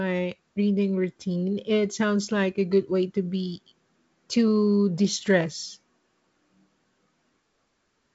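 Nothing stood out on listening to this speech, which carries the wideband telephone character of G.722 coding with no content above about 7.7 kHz.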